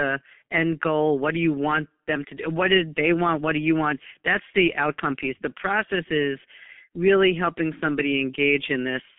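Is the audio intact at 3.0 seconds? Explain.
No. At 3.0 seconds, as across the whole clip, the speech carries G.723.1 codec damage. Nothing reaches above 3.7 kHz, and the slow, coarse voice model makes it muffled and hoarse with smeared consonants. That fits a bitrate near 6 kbit/s.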